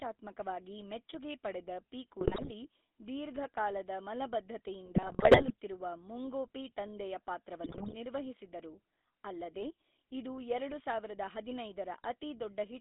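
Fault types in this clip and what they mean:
GSM full-rate codec: The speech runs through an early mobile-phone codec throughout. It rebuilds the voice from a vocal-tract model driven by a coarse pulse train, which fits a 13 kbps rate. This gives a plainly audible buzzy, gravelly roughness. The band spans roughly 250 Hz to 3.7 kHz.
GSM bit errors: Corrupted bits reach the decoder in three bursts, at 2.20 to 2.68 s, 4.86 to 5.51 s and 7.64 to 7.95 s. Damaged filter, pitch or gain values warp the spectrum or jolt the level frame by frame. The speech briefly breaks up and garbles.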